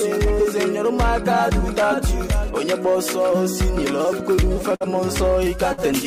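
Short concealed packet loss at 4.35 to 4.39 s: about 20 ms never arrived, so the receiver extended the preceding sound to cover it, leaving a brief smear.

Bursts of packet loss at 4.75 to 4.82 s and 5.72 to 5.93 s: each time roughly 60 ms went missing. About 50 ms was bridged with a fading continuation of the last sound before the audio resumes further on.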